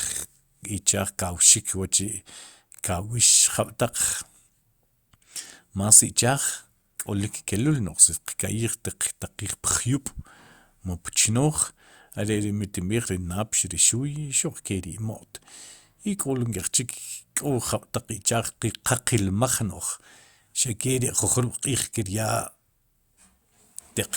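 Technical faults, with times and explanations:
No technical faults can be heard in this recording.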